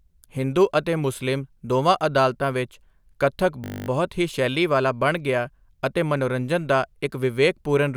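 From 3.64 to 3.88 s, after "ਦੋਵਾਂ ਅਦਾਲਤਾਂ ਵਿੱਚ ਕੱਥਕ", a system hang loop occurs: playback kept cycling one 20 ms buffer while the system stalled, producing a steady 50 Hz buzz.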